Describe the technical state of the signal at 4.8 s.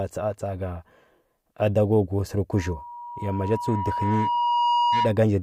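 At 4.8 s the signal is dominated by loudspeaker feedback squeal, which runs from 2.51 s to 5.17 s. The microphone is picking up the loudspeaker it drives, and at 961 Hz the loop gain has passed unity, so that tone regenerates on each trip around. It swells over roughly two seconds and by this point sits around 5 dB above the speech, heard as a steady, piercing howl.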